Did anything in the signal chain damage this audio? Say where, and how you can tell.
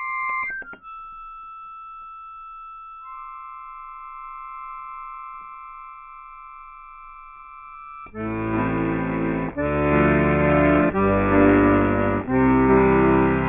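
No, nothing in this recording of sounds points to damage at any stage of the chain.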